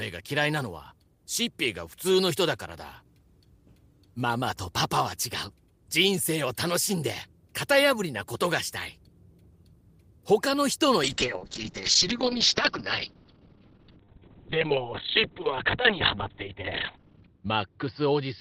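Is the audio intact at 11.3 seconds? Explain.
No. A call bitrate drop runs from 11.04 s to the end. The encoder falls from 32 to 7 kbps and cuts bandwidth to 4 kHz, so speech turns muffled and rough.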